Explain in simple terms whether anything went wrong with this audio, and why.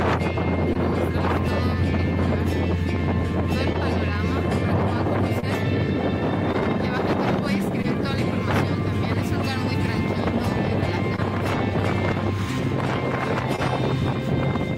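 Short concealed packet loss: small pieces of the stream arrived too late at 0.73, 3.73, 5.40, 6.52, 7.82, 11.16 and 13.56 s. The receiver guessed the missing bits, leaving brief smears or wobbles.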